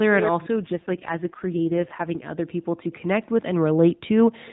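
From 0.61 s to 2.27 s the speech turns rougher and more synthetic, with a buzzy edge, then clears again. This is an AMR rate drop, consistent with the mobile codec stepping down from 12.2 to 4.75 kbps, trading speech detail for error protection without narrowing the band or leaving a gap.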